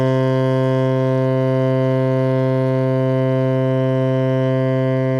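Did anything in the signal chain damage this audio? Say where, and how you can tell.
No, nothing in the signal chain audibly damaged this music; level, continuity and bandwidth hold steady throughout with no sign of a stage having left its mark on the signal.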